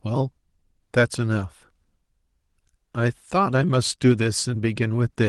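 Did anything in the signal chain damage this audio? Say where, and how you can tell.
No, nothing along the signal chain audibly damages this speech recording; the signal stays continuous and intact throughout, with no defect traceable to any stage.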